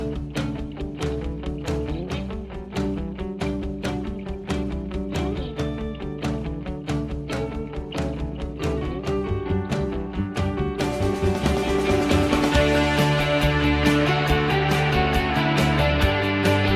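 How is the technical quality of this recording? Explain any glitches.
No glitches to explain here, as nothing in this recording stands out as a technical fault at any point.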